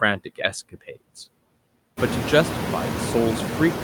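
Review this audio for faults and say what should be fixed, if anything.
A noise suppressor runs through the whole clip, cutting bands it judges to be steady noise by about 20 dB, frame by frame. The background therefore pumps: it drops away in the gaps between words and comes back up underneath the speech. This is most noticeable after the room noise rises by about 18 dB around 2 s, leaving it only about 7 dB below the speech. That rise is the room itself, not a fault. To prevent these noise suppressor artifacts, use a gentler suppression depth, closer to 10 dB, with slower gain smoothing, or reduce the room noise at the source.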